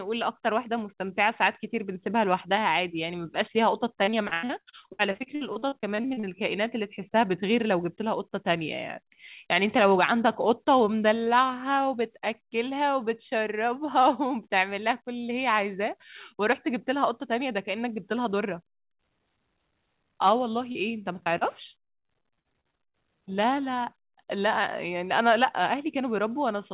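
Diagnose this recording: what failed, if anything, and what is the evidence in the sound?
Network packet loss is the main failure, as repeated packet loss with that robotic sound. From 4.04 to 6.26 s the speech goes choppy, with pieces missing: a couple dozen dropouts, the longest about 88 ms, patched so that roughly a third of that stretch is concealment rather than real audio. It happens again from 21.23 to 22.97 s, with gaps up to 59 ms and about a quarter concealed. Each hole gets filled by extending the last sound, and the next hole arrives before things recover.

There's also one short concealed packet loss, also on the network side, at 20.72 to 20.78 s, just before the second choppy run. About 30 ms went missing, and the receiver bridged it by continuing the preceding sound before blending back in, so you hear a brief smear or wobble rather than a clean gap. It's an isolated late or lost packet. 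The narrowband ceiling at 4 kHz is simply the call codec, which sounds like G.711 A-law at 64 kbps.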